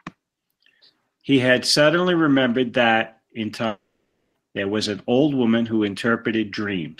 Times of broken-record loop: none

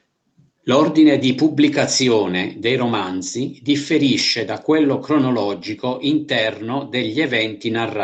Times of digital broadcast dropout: none

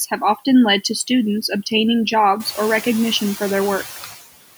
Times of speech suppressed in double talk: none

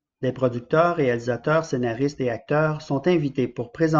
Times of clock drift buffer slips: none

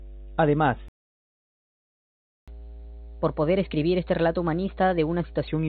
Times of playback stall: 0.88-2.48

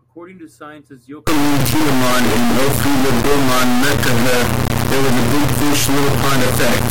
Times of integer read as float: 1.27-6.91

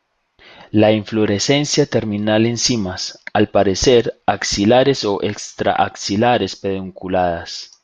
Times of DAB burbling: 5.76-5.88

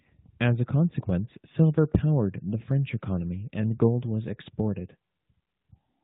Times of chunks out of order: none

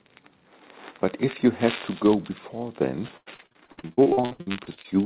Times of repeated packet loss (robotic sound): 3.08-4.86

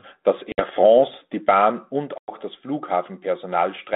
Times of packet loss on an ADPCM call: 0.52-0.60, 2.18-2.30

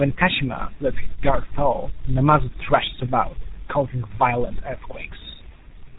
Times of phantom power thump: none

